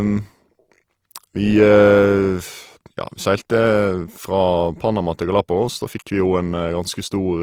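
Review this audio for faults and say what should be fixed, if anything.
Throughout the speech there is a grainy, rough texture: tones turn noisy rather than dropping out, which points to likely Opus compression in its music mode at a low rate, fitting about 24 kbps. Unlike MP3 damage, there is less swirling and few watery holes, and the full bandwidth stays intact.

Encode from the original source at a higher Opus bitrate to prevent it.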